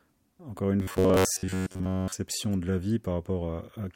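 From 0.8 to 2.13 s the speech turns into robotic sound from repeated short buffers. A rigid, metallic buzz near 94 Hz sets in. The likely cause is starved playback looping about 11 ms of audio, so roughly 70 percent is repetition.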